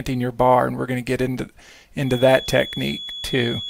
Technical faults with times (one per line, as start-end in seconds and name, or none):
2.00-3.69 feedback whistle